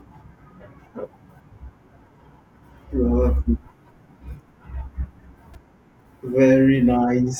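A speech clip with a repeated buffer at 5.54 s: a roughly 3 ms piece, fitting a 128-sample buffer, plays four extra times, producing a click or brief buzz and skipping about 10 ms. The waveform shows identical repeating cycles, and the spectrogram shows a vertical band.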